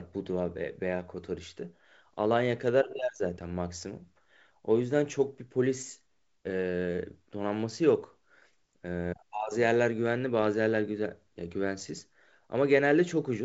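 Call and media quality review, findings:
No faults found in this wideband call audio.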